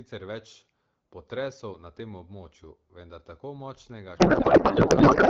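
Speech coded with AMR wideband (HD Voice), sounding clean enough to fit a 12.65 kbit/s mode, breaks into garbled noise and warble from 4.17 s to the end. This is a codec payload misread: octet-aligned AMR frames are parsed as bandwidth-efficient, so every field lands in the wrong place.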